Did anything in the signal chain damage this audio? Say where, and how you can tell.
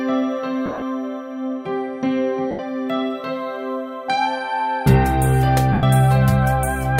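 Yes, at the codec and wireless stage: lost LE Audio frames. There are dropouts at 0.66–0.82 s (about 110 ms lost, scattered, with the longest run around 40 ms), 2.51–2.59 s and 5.73–5.83 s. On each loss the LC3 decoder repeats the last spectrum with randomised signs, so tonal content smears into noise. On a spectrogram, harmonic lines blur into diffuse bands; on the waveform, envelopes go ragged and decay. Gaps in 10 ms steps fit LC3 frames.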